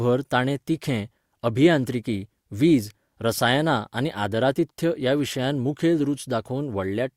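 A speech recording with no technical faults to be heard anywhere in the signal.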